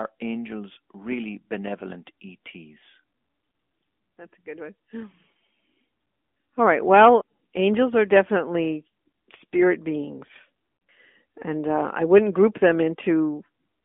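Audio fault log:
Throughout: AMR narrowband mobile codec. Speech is squeezed into a 200 Hz to 3.5 kHz telephone band, so nothing above 4 kHz survives. Pulse-driven vocal-tract coding at 10.2 kbps leaves plainly audible buzzy, synthetic texture.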